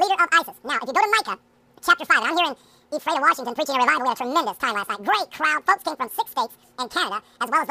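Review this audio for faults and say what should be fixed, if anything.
A wrong sample rate affects the whole clip: everything runs at twice its proper speed and sits 12 semitones, a full octave, too high. That points to material recorded at 24 kHz being played at 48 kHz with no conversion. To prevent it, read the source rate from the file and resample to the output rate before playback.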